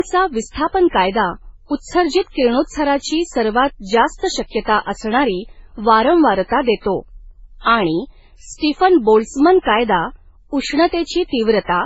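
From start to finish the speech has nothing above 7.7 kHz, and the artefacts of two codecs are heard together. The likely cause is transcoding between lossy codecs: the sound points to a very low-rate MP3 re-encoded as Vorbis near 25 kbit/s, each stage adding artefacts.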